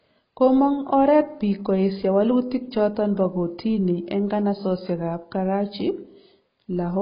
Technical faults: AAC compression

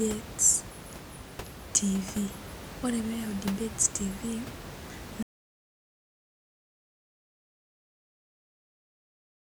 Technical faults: audio dropout to silence

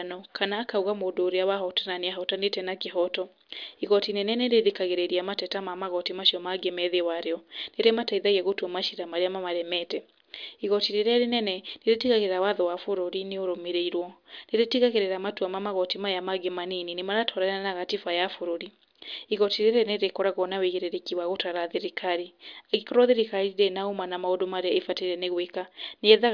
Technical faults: none

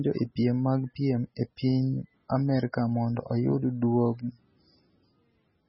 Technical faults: MP3 compression

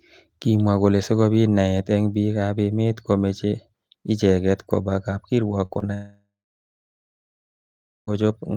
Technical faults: short concealed packet loss; long network dropout

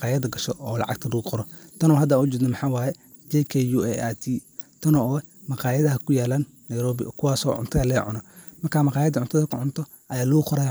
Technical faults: none

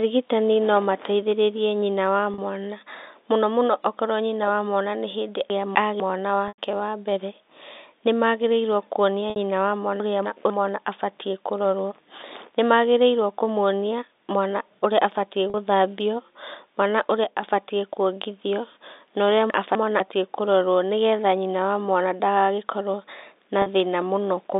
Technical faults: packet loss with pitch repetition; chunks out of order; one channel drops out

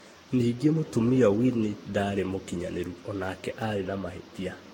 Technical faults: generation loss

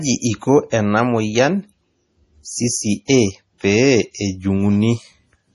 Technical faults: MP3 compression; pre-echo

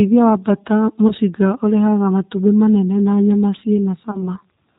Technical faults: G.729 codec; VoIP packet loss concealed by the speech codec

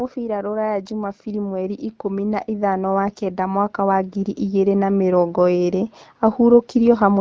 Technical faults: automatic gain rising

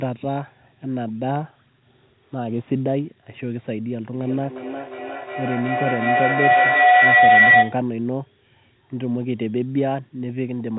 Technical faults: feedback howl

